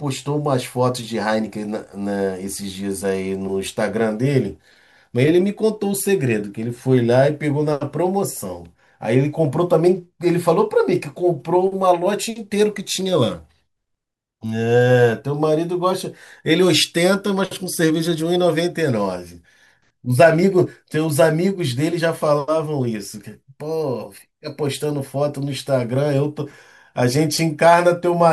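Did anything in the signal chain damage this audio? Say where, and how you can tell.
No, nothing audible points to damage at any stage of the chain, from capture through to playback.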